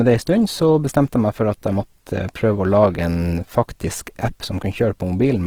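From start to finish, the speech has a grainy, rough texture, with voiced sounds turning noisy rather than smeared or swirling, and the damage is plainly audible. The top end stays open up to about 20.4 kHz, so the sound isn't muffled. This is likely Opus compression in its music mode: starved of bits, it refills bands with folded or noise-like content, which fits a low rate near 16 kbps.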